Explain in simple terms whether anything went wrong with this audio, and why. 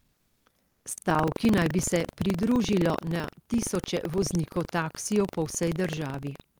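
Two things went wrong.

Throughout the speech there is buffer tearing: a steady, robotic buzz repeating about 23 times a second, which fits a 2048-sample buffer. The program filling the audio buffer and the hardware playing it have drifted out of step, so a small slice of every buffer, a few percent, replays sound from about a tenth of a second earlier. Unlike ordinary background hum, the buzz comes and goes with the speech and falls silent in the pauses.

At the very start, from 0 to 0.45 s, and again from 0.67 to 0.85 s, there is comfort noise in place of the background. The real room sound disappears and is replaced by a flat, featureless hiss that is noticeably quieter, most noticeably in the first stretch. This is likely discontinuous transmission: the sender stopped sending during the pause, and the receiver filled the gap with made-up noise. Unlike a dropout, the sound never goes completely silent.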